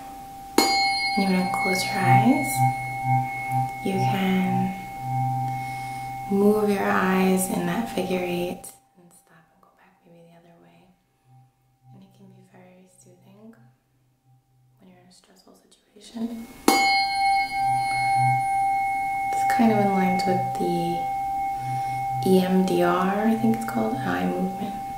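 A level control twice jumps in coarse, unsmoothed increments, so each jump lands as a small click and the change comes out as zipper noise. From 8.45 to 8.88 s the sound drops by roughly 25 dB in 5 dB steps, about ten a second, with an audible ticking riding on the fade. From 15.87 to 16.38 s it climbs back by a similar amount in 4 dB steps, zipping the same way as it rises.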